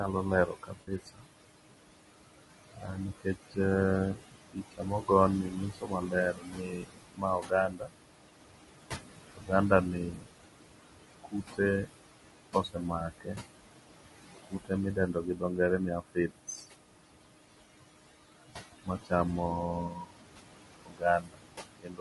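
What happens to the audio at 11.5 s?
At 11.5 s the speech is being cut by the noise suppressor. The span runs from 9.27 to 13.4 s. The suppressor mistakes parts of the speech for the room noise and turns them down, by about 22 dB at the deepest. Roughly one and a half seconds in all are affected. Soft consonants and word endings sound swallowed or faint.

Noise suppressor artifacts are also present here. The background is lowered by about 20 dB between phrases and comes back up under the speech.

The voice is also rough and grainy, with noise between the harmonics and a dull, synthetic top band. This plainly audible damage is likely from low-delay AAC compression, AAC-ELD. Its short frames resolve pitch poorly, and the graininess fits a bitrate around 32 kbps.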